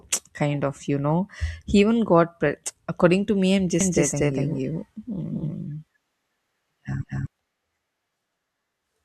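Speech clip with a doubled audio track from about 3.81 to 7.27 s: a dry copy roughly 200 ms behind, near equal level, likely a second capture path or misaligned edit.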